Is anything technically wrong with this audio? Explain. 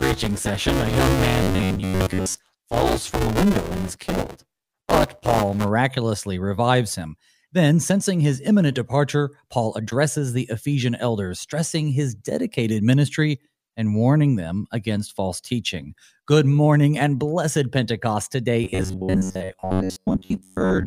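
Yes. The speech carries two distinct playback faults.

From 0.00 to 5.70 s there is buffer tearing. The writing program and the reading hardware have drifted so that they cross inside each period, and roughly half of every buffer holds audio from one lap earlier, about 10 ms old. The hard joins repeat at 200 Hz, which fits a 5 ms buffer, producing a steady robotic rattle that is present only while the talker is sounding. A spectrogram shows evenly spaced harmonic lines at 200 Hz multiples, and the waveform shows regular step discontinuities.

From 1.43 to 2.38 s, overlapping the tearing, and again from 18.64 to 20.87 s, the voice becomes a rigid metallic buzz at 93.8 Hz that only loosely follows the speech. These passages are robotic sound from repeated short buffers. The likely cause is audio arriving too seldom, with most of the time filled by replaying the last fragment, about 10.7 ms long. 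The spectrogram shows flat, comb-like harmonics at 93.8 Hz intervals that ignore natural pitch movement, and the waveform shows identical cycles copied in succession.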